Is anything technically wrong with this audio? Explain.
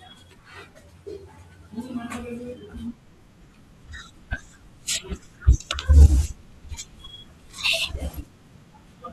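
No, nothing technically wrong turns up here; it's a short bit of speech and there's no fault to point to anywhere in it.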